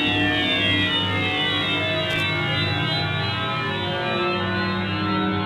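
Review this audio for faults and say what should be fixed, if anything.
Loose connector crackle at 2.1 to 2.23 s: a dirty or worn contact rapidly made and broke the signal path, leaving an irregular burst of scratchy crackle. Clean or replace the connector and secure the cable so it cannot shift during recording.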